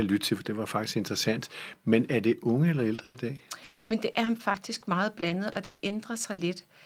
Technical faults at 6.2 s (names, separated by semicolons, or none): repeated packet loss (robotic sound)